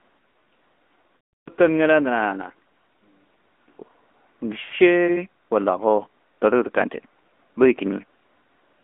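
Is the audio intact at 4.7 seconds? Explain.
No. From 4.62 to 4.73 s there are lost AMR speech frames: about 100 ms of audio is missing, which fits five consecutive 20 ms frames failing their checksum. The decoder fills the gap by repeating the last good pitch and vocal tract parameters at decreasing gain, so the speech smears into a drawn-out, warbly tone that fades toward silence before the signal returns, briefly weak and rough.

The whole clip, including this moment, also carries the AMR narrowband mobile codec. The audio is confined to a telephone band of roughly 250 Hz to 3.4 kHz, with nothing above 4 kHz. The speech is rebuilt from a vocal tract model driven by a few pulses per subframe, and the damage at what sounds like a 10.2 kbps mode is plainly audible as a buzzy, synthetic quality.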